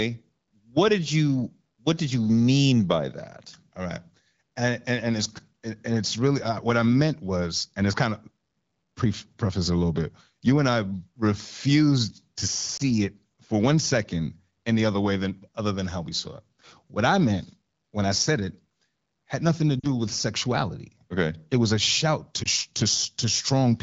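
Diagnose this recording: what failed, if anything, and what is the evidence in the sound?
Lost AMR speech frames on the radio link cause brief warbling dips at 12.77–12.82 s and 22.43–22.48 s, and a longer fading smear at 19.80–19.88 s. The AMR wideband decoder repeats its last good pitch and vocal tract settings at falling gain, so the sound smears rather than dropping to the hard silence of a buffer dropout.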